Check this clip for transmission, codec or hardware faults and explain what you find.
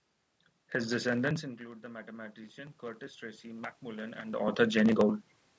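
One processing fault stands out: automatic gain rising from 1.57 s to 4.46 s. After the talker's level falls by about 15 dB near 1.5 s, the gain control slowly adds about 8 dB. Unlike a talker simply moving closer, the room noise swells along with the voice.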